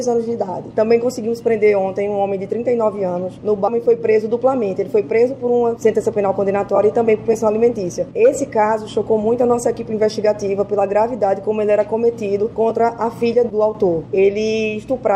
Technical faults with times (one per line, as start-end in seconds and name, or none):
3.67-3.70 stream segment skipped